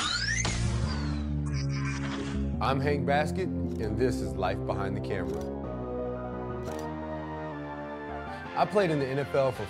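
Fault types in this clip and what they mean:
Drift correction step: a clock-matching stage likely changed the playback rate in one jump to rebalance its buffer. From 1.54 to 2.66 s the sound runs 5.8% slow and 104 cents flat. From 5.32 to 7.52 s it runs 5.8% fast and 98 cents sharp, then snaps back.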